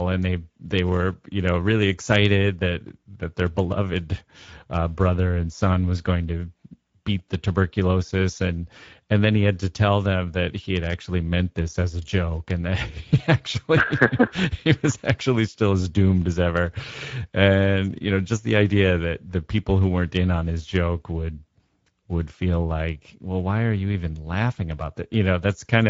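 From start to finish, the speech carries Speex codec damage. Speex is a CELP codec that models the voice and spends its limited bits on the excitation signal. Here that budget is tight, and the damage is plainly audible. The voice sounds noisy and hoarse throughout. Nothing is present above 7.7 kHz, so the top of the band is cut away. The degree of damage points to a rate of around 17 kbps.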